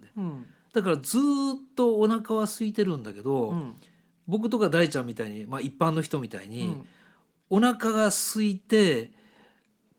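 No technical faults can be heard anywhere in this speech clip. The Opus voice compression keeps the full band, with its upper range coded above 8 kHz alongside the lower band. That light touch fits a hybrid setting at around 24 kbps.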